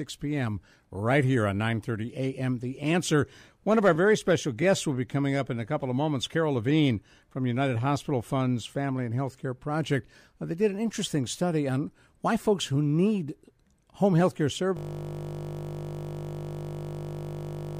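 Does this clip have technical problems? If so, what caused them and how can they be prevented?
Yes. From 14.77 s to the end, the speech is replaced by a system hang loop. The driver or computer froze while the sound hardware kept replaying one 20 ms slice of its ring buffer, about 150 times, producing a steady 50 Hz buzz. Unlike mains hum, this buzz carries the timbre of that frozen snippet of speech, and it stays exactly identical on every cycle. Keeping audio drivers updated and preventing the system from stalling the audio thread, for example through CPU overload or blocking calls, prevents this.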